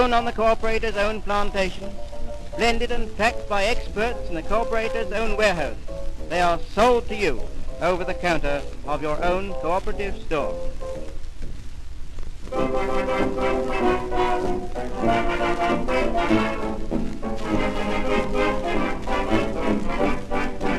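From 12.19 s to 16.04 s, a train of clicks runs over the sound. About six clicks arrive each second, at an uneven pace, roughly thirty in all. Each click has much the same sharp shape. They peak at about the level of the sound itself, and are heard as ticking and popping, even in quieter moments. The likely cause is a repeated electrical pulse, from nearby equipment or a faulty connection or power supply.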